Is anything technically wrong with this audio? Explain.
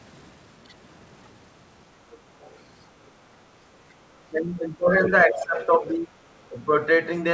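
Yes. Around 2.10 to 2.18 s and 2.40 to 2.57 s, then 5.03 to 5.10 s and 5.40 to 5.66 s, the other side's voice is leaking through. The echo canceller likely failed to fully remove the far end playing from the loudspeaker into the microphone. The first two scraps sit far below the speech, roughly 30 dB down; the later two are much stronger, only about 10 dB under it.

The speech is suppressed in double talk at 4.33 to 4.93 s, 5.25 to 6.21 s and 6.49 to 6.71 s. With both sides talking at once, the canceller likely couldn't tell the talker from the echo and turned everything down. The speech dips by roughly 15, 20 and 10 dB respectively, so these stretches sound faded or partly cut out.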